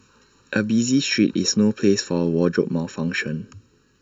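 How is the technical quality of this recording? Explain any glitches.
The recording suffers from channel delay (comb filtering) from start to finish. One channel arrives less than a millisecond after the other, and when the two are folded to mono, frequencies whose half-cycle matches that gap cancel. This cuts a first notch near 700 Hz and further notches spaced about every 1.4 kHz above it. The speech sounds hollow and phasey. Unlike a flanger or phaser, the notches never sweep, and unlike room reverberation there is no tail after each syllable.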